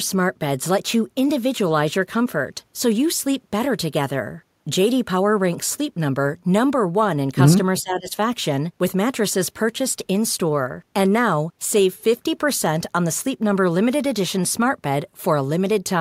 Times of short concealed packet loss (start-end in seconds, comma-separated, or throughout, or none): none